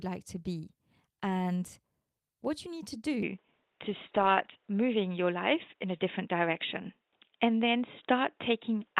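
Speech clip, and right after "what you need to", at 3.22 s, it suddenly goes narrower and boxier for the rest of the clip. Nothing gets through above about 3.8 kHz, the level shifts by roughly 5 dB, and a faint new noise floor creeps in. That's likely the input switched to a poorer device, with no gap at the changeover. On top of that, from 3.48 to 4.75 s it turns rough and watery. That's a call bitrate drop, consistent with the encoder being squeezed from around 32 to 14 kbps and sitting near the bottom for about 1.2 s before recovering.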